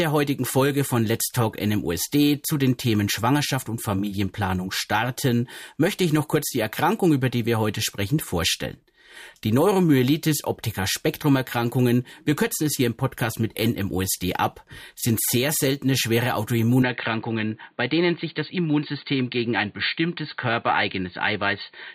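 At 16.82 s the sound abruptly turns dull and boxy and stays that way to the end, the mark of an input switched to a poorer device, likely a change of microphone or a headset call profile. There is no gap at the switch and the level stays about the same, but a faint new noise floor appears, roughly 45 dB down. On a spectrogram everything above 4.6 kHz vanishes at that instant, leaving a flat ceiling.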